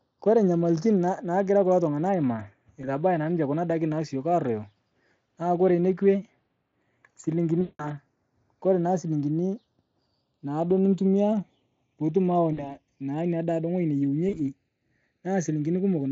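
Throughout, a slow flanging sweep colours the speech: the channels are drifting apart, their clocks differing by roughly 50 ppm, so inter-channel delay creeps toward half a millisecond.

At 2.81 to 2.91 s, just before "naa ninche", 7.61 to 7.93 s, 12.53 to 12.77 s, between "naaduo nitumiyaa piitum awa" and "naa nia daa ng'oji", and 14.29 to 14.43 s, right after "naa nia daa ng'oji", the speech smears into a buzzy tone or coloured noise that fades, and stays weak for a moment after. This is VoIP packet loss concealed by the speech codec. The decoder rebuilds roughly 20, 180, 40 and 40 ms of missing audio from its last pitch and filter, and recovers slowly. The underlying Speex coding itself sounds clean.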